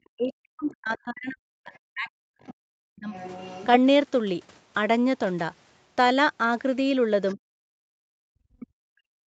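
The echo canceller likely could not tell the talker from loudspeaker echo while both sides spoke, so speech is suppressed in double talk from 0.13 to 3.12 s. The voice dips by up to about 40 dB. Within that stretch, the other side's voice leaks through at 0.64–0.76 s and 1.73–2.51 s. Residual echo the canceller likely missed comes through as a faint second voice about 25 dB under the speech. It returns at 3.12–3.67 s, slightly louder at about 20 dB down, and as a brief scrap at 7.30–7.35 s. From 7.85 s to the end, double-talk suppression likely strikes again, pulling the speech down by as much as about 40 dB.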